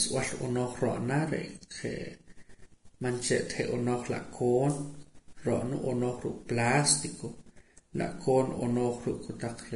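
From start to finish the speech sounds hissy and grainy, with a roughened tone and softened, smeared consonant onsets, and nothing is present above 10.6 kHz. The likely cause is heavy Vorbis compression at a low setting, consistent with a bitrate near 31 kbps. The encoder lowered its cut-off and quantised the upper band so coarsely that fine treble detail was swapped for noise of similar energy, leaving the air replaced by a fizzy, gritty layer.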